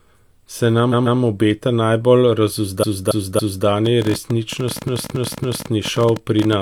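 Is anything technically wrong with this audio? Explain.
Yes, there are two problems. First, repeated frames: a chunk of compressed audio gets replayed, so the speech stutters. At 0.89 to 1.16 s a 139 ms block repeats twice more. At 2.79 to 3.63 s and again at 4.83 to 5.67 s a 279 ms block repeats three more times. Each repeat stretches the clip.

Second, a train of clicks runs from 3.86 to 6.54 s: around thirty similar pops at about 14 per second, unevenly spaced, sitting roughly 10 dB above the speech and audible in the gaps too. That's likely interference from nearby gear or a faulty connection or power supply.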